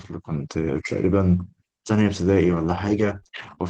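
At 1.11 to 1.13 s there is a brief rough, noisier patch with no dropout. This is a lost packet rebuilt from error correction: one 20 ms packet went missing, and the decoder played the coarse low-bitrate copy carried in the following packet.

From 2.51 to 3.59 s the speech turns choppy, with small pieces missing. This is repeated packet loss. Five short gaps, none longer than 21 ms, were each covered by stretching the previous sound. The decoder's recovery after each gap leaves about 0.4 s sounding roughly rebuilt. Throughout the clip, the high end stops near 12 kHz, which fits an Opus call path at a moderate bitrate.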